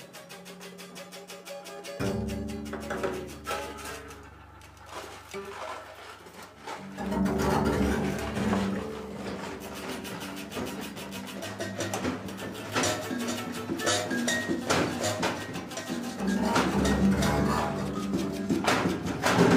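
No technical faults are audible.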